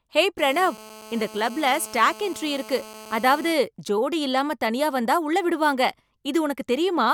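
From 0.38 s to 3.53 s, GSM phone buzz sits under the speech: a hard, raspy 217 Hz tone full of harmonics, about 19 dB down, ending before "ஜோடி இல்லாம தனியா வந்தா". Unlike 50 or 60 Hz mains hum, it rattles, and its steadiness fits a call.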